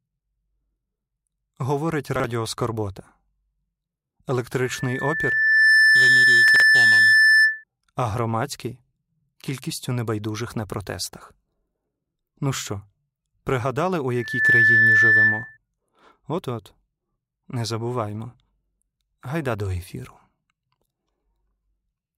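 At 2.16 to 2.24 s the speech briefly jumbles as chunks play out of order: one 40 ms chunk arrives a chunk late and plays after its successor. The waveform shows three abrupt discontinuities. From 4.62 to 7.64 s a loudspeaker feedback squeal builds over roughly a second into a 1.8 kHz howl about 10 dB above the speech, ending just before "а громадський кількістю небайдужих". On a spectrogram it is a single bright horizontal line that brightens as it grows, and the waveform envelope swells. Inside it, at 6.48 to 6.6 s, a 40 ms chunk lands two chunks late, leaving the same abrupt joins. After "пригадали у", the squeal returns from 14.15 to 15.57 s at the same frequency, this time reaching full strength in about 0.3 s.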